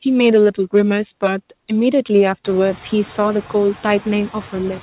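A noise suppressor works on this speech recording throughout, pulling the background down by about 11 dB frame by frame, so the noise sinks between the words and rises under them. From 0.25 to 0.80 s a stage is overdriven by about 3 dB and hard clipping flattens the peaks, adding upper harmonics heard as crackle on the loudest syllables. Underneath, the room noise climbs by about 18 dB around 2.5 s and stays about 19 dB below the speech, and nothing reaches past 4 kHz, which fits a G.711 mu-law call path at 64 kbps.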